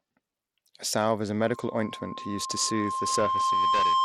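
From the start, the speech has a gritty, coarse edge. Treble flickers, and nothing reaches above 16.7 kHz. This points to a low-bitrate link, perhaps near 96 kbps. The likely cause is Bluetooth SBC compression, which starves the top sub-bands of bits and quantises the rest roughly.

At 1.41 s, just after "salve is a", a loudspeaker feedback squeal begins. A microphone is hearing its own loudspeaker, and the loop gain tops one at 1 kHz. That single tone swells over about two seconds. It ends roughly 5 dB above the speech and holds to the end.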